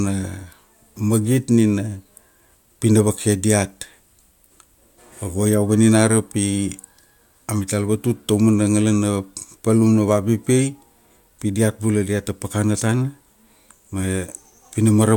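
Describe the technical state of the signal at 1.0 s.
At 1.0 s the speech signal is intact, with no audible dropout, distortion, glitch or other technical fault at that moment.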